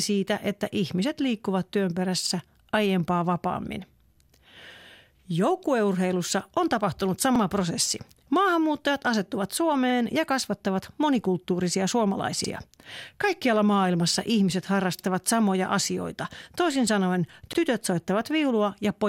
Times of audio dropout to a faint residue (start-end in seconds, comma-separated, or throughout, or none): none